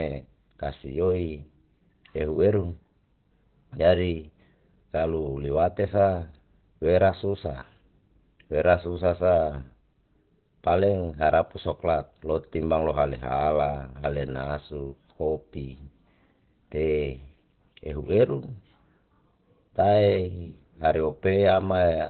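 Opus compression affects this speech clip throughout: nothing survives above about 4.3 kHz, and the sound is muffled and hoarse, with heavy codec damage. The likely cause is Opus falling back to its narrowband SILK speech mode, which fits a very low rate around 12 kbps.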